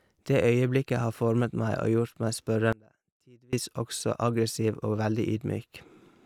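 From 2.73 to 3.53 s the speech drops out abruptly for about 0.8 s, leaving only a faint residue far below normal level, likely a brief signal loss with the path still live.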